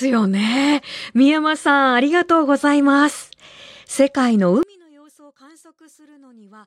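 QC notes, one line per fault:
4.63–6.66 s, one channel inverted: the speech falls about 30 dB to a faint residue rather than silence, likely from reversed polarity cancelling centred content in mono.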